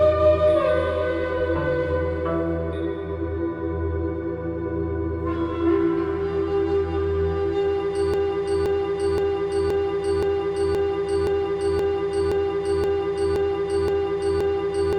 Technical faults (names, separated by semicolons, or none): broken-record loop